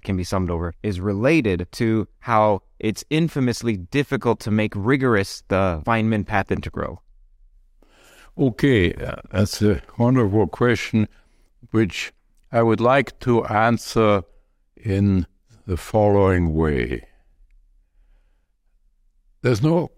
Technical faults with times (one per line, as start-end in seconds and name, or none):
none